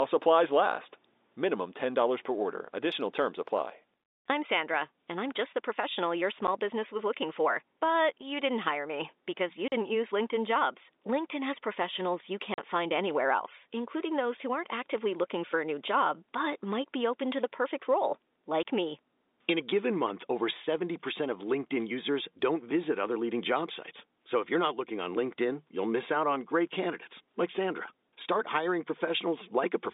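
Packet loss filled with silence cuts the speech four times. There is a brief dropout at 6.47 s, then 40 ms holes at 9.68 s after "hire me because you" and at 12.54 s before "find anywhere else including". A short gap follows "to the perfect role" at 18.63 s. Each hole has hard edges, and the lengths fit 10 ms packets. All of this sits inside the narrow G.711 telephone band.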